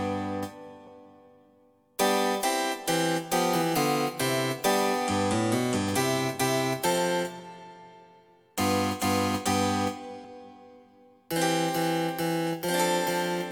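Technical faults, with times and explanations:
10.24–10.29 s, compressed frames skipped: the sound lurches forward, and roughly 70 ms of material simply never arrives. Whole blocks of the compressed stream were not decoded, either missing from the file or rejected as damaged, so playback resumes at a later frame boundary.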